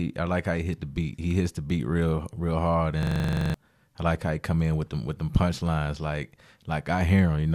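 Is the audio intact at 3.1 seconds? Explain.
No. Just after "beat real real hard", a system hang loop from 3.03 to 3.54 s replays one 42.7 ms buffer twelve times while the driver is frozen, producing a rapid 23.4 Hz stutter.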